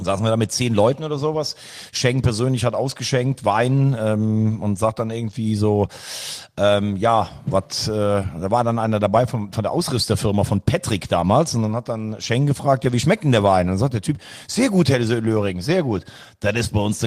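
At 8.21 to 8.27 s, between "ähm ja was äh" and "war dann einer dabei", packets were lost and the decoder played low-bitrate error-correction copies from the following packets. This lost packet rebuilt from error correction leaves no gap, but about 40 ms of speech sounds rougher and noisier.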